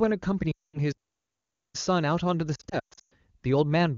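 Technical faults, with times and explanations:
0.52–0.80 s, lost AMR speech frames: radio errors corrupted a run of frames, about 220 ms of wideband speech, so the decoder kept reusing the last good pitch and vocal tract settings while lowering the gain. The sound drops to near silence within two frames, then comes back weak or rough for a moment as the decoder recovers its state.
0.92–1.75 s, playback stall: the player's output halted for about 0.82 s, likely because it ran short of buffered data or its playback thread was held up. The speech cuts off in mid-flow into a clear gap of silence, then carries on again once output resumes.
2.55–3.13 s, lost AMR speech frames: errors here are scattered rather than continuous, with about 360 ms of frames lost across a 0.56 s stretch and no run longer than 120 ms. Each gap is filled by concealment that repeats the prior settings at falling gain, so the speech warbles and dips repeatedly instead of dropping out once, with rough recovery between losses. 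The AMR wideband (HD Voice) codec itself runs at 23.85 kbit/s, so the good frames around these losses are clear.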